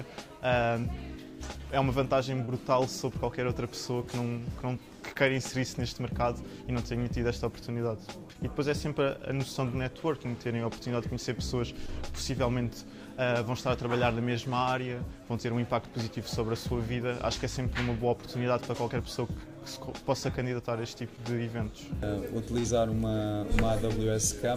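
Short concealed packet loss occurs at 2.45, 5.14, 8.33, 11.87 and 21.16 s. Each time, about 20 ms of audio failed to arrive. The receiver extended the preceding sound for 10 to 22 ms and then blended back, which leaves a brief smear or wobble.

A burst of packet loss follows at 22.59 to 22.66 s, where about 40 ms went missing. The receiver kept the last sound going for 47 ms, fading it as it went. This gives a short held buzz or hiss before the audio picks up again further on.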